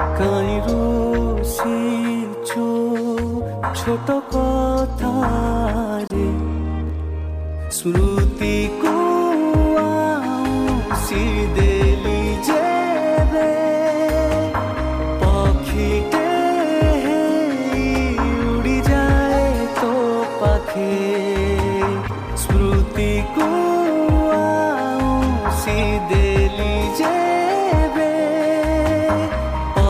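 Corrupt frame decoded, 3.73 to 3.81 s: flipped bits in a few compressed frames were played anyway, so misread gains and codes put energy at frequencies where it doesn't belong. The result is a short chirp-like burst peaking around -15 dBFS, lasting only as long as the damaged frames.

Corrupt frame muted, 6.00 to 6.12 s: here the decoder rejected the damaged frames, and the player filled the gap with silence. The sound drops out abruptly for about 0.12 s, a hole that fits a run of several consecutive frames, then resumes with its timing intact.

Corrupt frame decoded recurs at 22.07 to 22.10 s and 25.79 to 25.83 s. Both are brief squeak-like blips from garbled frames being decoded into misplaced spectral energy. The first peaks around -15 dBFS, and the second is louder, near -10 dBFS.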